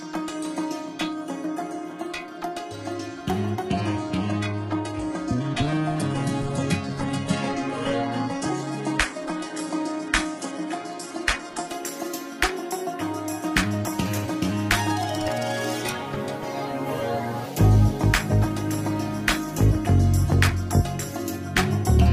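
At 3.70 s the adaptive stream drops to a lower bitrate, apparently because the connection slowed, and it stays there until 11.70 s, about 8 seconds. The switch is abrupt but seamless, with no gap. Treble vanishes above 11.4 kHz, and codec artefacts rise. That character points to a very low-rate HE-AAC stream of around 12 kbit/s replacing roughly 96 kbit/s AAC, before full quality snaps back.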